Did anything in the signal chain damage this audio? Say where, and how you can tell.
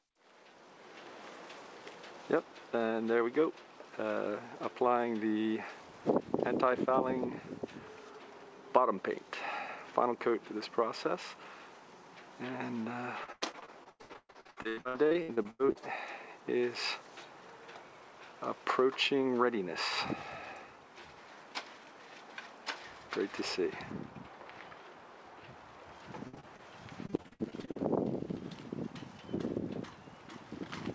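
Yes. The damage comes from the network stage, as repeated packet loss (robotic sound) in three stretches: 13.24 to 15.77 s, 26.27 to 26.60 s, and 27.06 to 27.77 s. Each stretch breaks into rapid dropouts, up to 125 ms long. The receiver patches every hole by stretching out the last received sound, so the audio turns choppy, with pieces missing. In the first stretch, nearly half the span is patched rather than real. The band stops at 8 kHz, consistent with a G.722 call codec.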